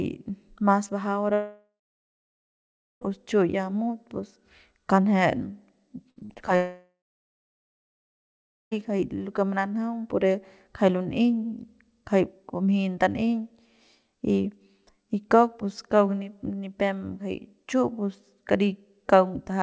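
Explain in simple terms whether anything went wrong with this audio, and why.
From 1.34 to 3.03 s and again from 6.56 to 8.73 s, the speech fades into a brief buzz, then goes silent. This is a long network dropout, likely the connection stalling, so that stretch of speech never arrived.

Just before the second dropout, from 6.11 to 6.49 s, the voice turns choppy and robotic. Five tiny gaps were patched over, a sign of repeated packet loss.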